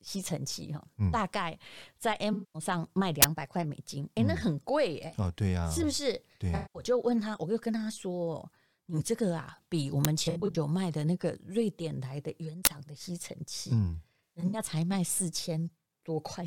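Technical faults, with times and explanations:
2.33–2.62 s, 6.55–6.82 s, 10.25–10.56 s, 14.24–14.59 s: AAC frame loss with concealment. The first two are solid gaps of about 0.21 s and 0.19 s. The last two are broken dropouts spread over about 0.3 s, with longest runs of roughly 70 ms and 100 ms. The decoder rebuilds each missing stretch from the last good spectrum, so the speech turns smeared, noisy and phasey. Each run fits a loss of eight to ten frames.
3.22 s, 10.05 s, 12.65 s: uninitialised buffer. A block of about 20 ms, then about 5 ms, then about 20 ms, is played before any audio has been written to it. Whatever was left in memory comes out as samples. The result is a sudden, loud crack or burst of digital noise that bears no relation to the speech around it and ends as abruptly as it starts.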